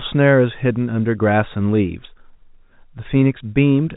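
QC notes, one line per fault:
No faults found.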